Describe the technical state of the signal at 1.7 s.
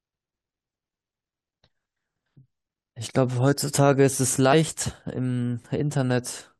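At 1.66 s the compressed speech stream carries damaged data: corrupted bytes make the decoder misread the frames there, lose sync and hunt for the next valid frame header. The result is a brief chirp or squawk cutting across the speech at that instant.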